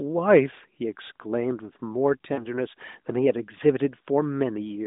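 Between 2.34 and 2.46 s, lost AMR speech frames interrupt the speech. About 40 ms of data went missing, which fits two consecutive 20 ms frames discarded after failing their checksum. The decoder filled the gap by repeating the last good pitch and vocal tract parameters at falling gain, so the sound briefly smears and dips rather than cutting out, then comes back rough for a moment. The narrowband telephone band, roughly 200 Hz to 3.7 kHz, is unaffected.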